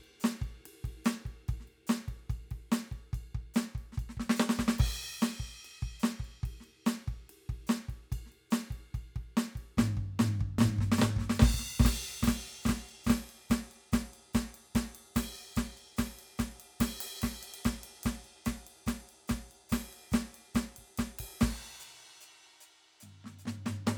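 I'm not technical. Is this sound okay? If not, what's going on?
No. From 10.58 to 13.24 seconds the music has a doubled audio track: a quieter copy trails about 0.4 seconds behind, likely from the same audio being recorded or mixed in twice.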